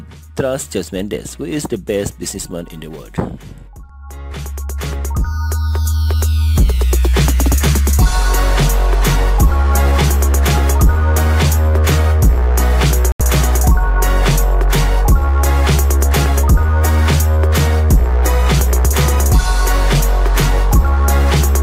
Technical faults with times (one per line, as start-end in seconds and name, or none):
13.12-13.21 Bluetooth stall